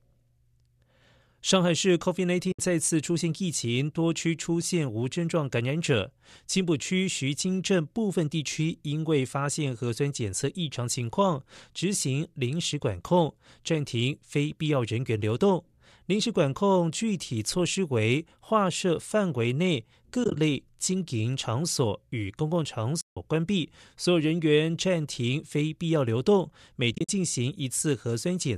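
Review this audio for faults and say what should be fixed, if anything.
There's AAC frame loss with muting at 2.52, 20.24, 23.01 and 26.93 s: soft-edged dropouts of 70 to 160 ms where lost frames were zeroed and cross-faded. Adding forward error correction or packet-loss concealment on the link would stop these holes.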